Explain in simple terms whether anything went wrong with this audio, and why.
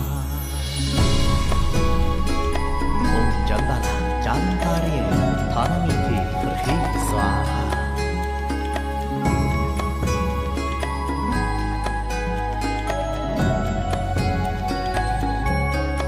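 Processor overload crackle appears from 6.64 to 7.11 s, a short burst of gritty tearing over the sound. The computer handling the audio fell behind and kept missing its deadlines for the tiny chunks it must deliver, each around a hundredth of a second long. A handful were late over that stretch, and each time a scrap of old audio was replayed with hard edges. Those repeated jolts make the crackle, which stops once the processor catches up.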